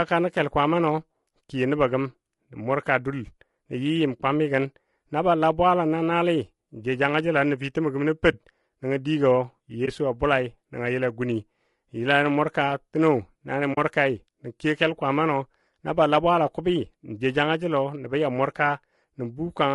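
Throughout this speech recording the voices sound rough and grainy, with noise filling the gaps between pitch harmonics and a thin, synthetic-sounding top band. This is likely low-delay AAC compression such as AAC-ELD at a rate near 32 kbps. Its short frames smear harmonics, unlike ordinary low-bitrate coding, which mainly dulls the highs. AAC frame loss with muting leaves brief dips at 8.31–8.34 s and 9.85–9.89 s, about 20 ms each and consistent with one lost frame, and a soft-edged hole at 13.73–13.78 s, about 40 ms and consistent with two. The sound fades out and back in, which sets these apart from hard dropouts or glitches.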